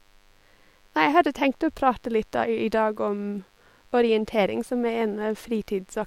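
DECT cordless phone buzz runs throughout the speech: a nearby DECT transmitter's 100 Hz radio bursts get rectified, leaving a thin, harmonic-rich buzz sitting far below the voice.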